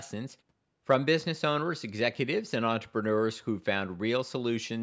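Nothing's wrong with this speech: the background dropping to silence in the pauses and the top end stopping around 8 kHz are just how call audio is normally processed.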